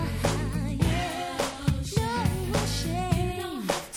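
No technical faults can be heard anywhere here.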